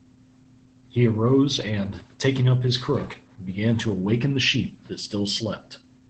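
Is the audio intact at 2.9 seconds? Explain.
No. At 2.9 seconds the speech carries Opus voice compression, which runs through the whole clip. The damage is plainly audible. The codec is in its SILK linear-prediction mode, modelling the voice and coding its excitation coarsely, which points to a low bitrate around 12 kbps in 20 ms frames. Wideband coding narrows the band, and nothing sounds above 14.2 kHz. The voice comes out muffled, hoarse and slightly robotic.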